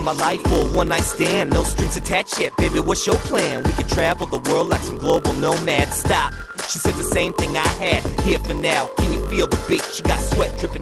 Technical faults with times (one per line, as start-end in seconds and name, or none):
0.00-10.81 block size mismatch (padded)